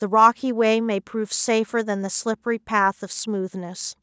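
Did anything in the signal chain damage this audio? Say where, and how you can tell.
No, nothing in the signal chain damaged this audio; it passed through call microphone processing, which trims the lowest bass and carries nothing above 8 kHz, as expected.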